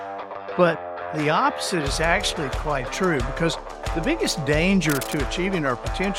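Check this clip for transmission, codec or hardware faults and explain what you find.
Three faults are present: two corrupt decoded frames and a short stretch of cable scratch noise.

A corrupt frame decoded appears at 1.48 s and again from 4.51 to 4.53 s. In each case a single compressed frame arrived with damaged bits, and the decoder played it anyway. Misread codes and gain values put energy in the wrong frequency regions for one frame's duration. Each event is a brief chirp or blip, the first peaking around -20 dBFS and the second slightly quieter at around -25 dBFS.

Cable scratch noise runs from 4.88 to 5.20 s. It is a dense, irregular burst of scratching and rustling laid over the sound, sitting roughly 10 dB below the programme level. The likely cause is a worn cable, connector or control being moved. Its contact resistance fluctuates rapidly as it shifts, and those fluctuations are added to the signal as uneven crackle for about a third of a second.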